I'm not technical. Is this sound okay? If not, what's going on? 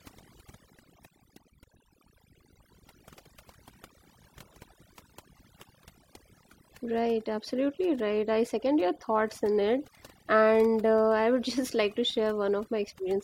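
No. Throughout the speech, the gaps between words drop to near silence with twinkling specks. That's overdone noise removal: a cleanup tool set too strong shut off parts of the sound it mistook for noise, taking quieter parts of the voice too.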